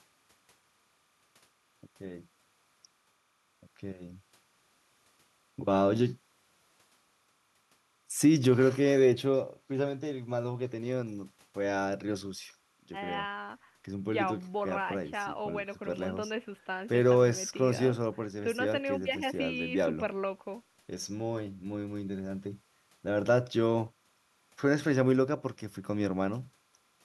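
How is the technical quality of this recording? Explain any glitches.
The speech is accompanied by a faint, steady chirping warble throughout the recording. This is timecode bleed. Linear timecode from an adjacent track or cable leaks into the audio, its square wave flipping between tones near 1 and 2 kHz. The pattern fits 30-frame code. It sits very low, roughly 45 dB under the speech.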